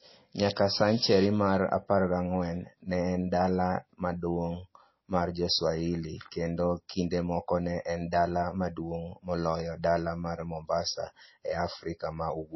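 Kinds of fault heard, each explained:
Low-bitrate audio saved at a high bitrate: throughout, the speech has nothing above 5.8 kHz, likely from a low-bitrate MP3 re-encoded at a high bitrate, which cannot restore removed content.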